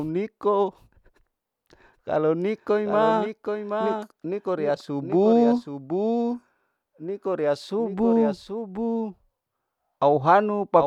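Throughout, the speech carries a doubled audio track: a copy about 5 dB quieter trails roughly 0.7 s behind, likely via a slower second path, with no echo-like decay.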